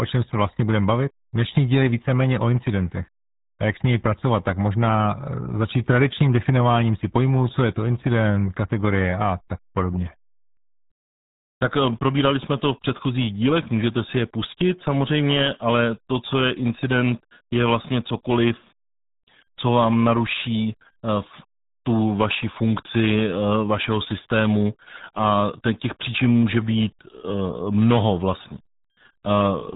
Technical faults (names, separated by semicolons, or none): RealAudio 14.4 codec